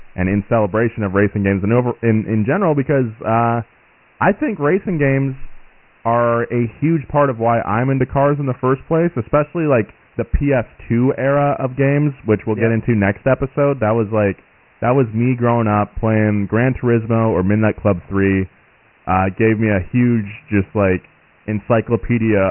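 The speech has been squeezed through Dialogic VOX ADPCM, the 4-bit OKI scheme used for phone menus and voicemail, from start to finish. Nothing reaches above 3 kHz, which fits a 6,000-samples-a-second rate and roughly 24 kbps. Each sample stores only a coarse step toward the next value, so the error is heavy: a gritty, granular hiss rides on every syllable, and the cut top end leaves the voice dull and boxed in.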